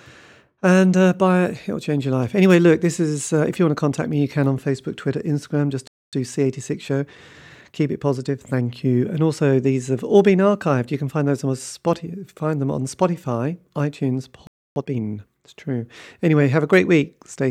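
At 5.88 s the speech drops out for 0.25 s. This is a playback stall, likely from the player running short of data. From 6.13 to 8.65 s, time-compressed catch-up hurries the speech to 1.1 times speed. Pitch stays normal. At 14.47 s a second stall silences it for 0.29 s, likely the same starvation. From 14.76 to 15.04 s, catch-up then rushes at double speed.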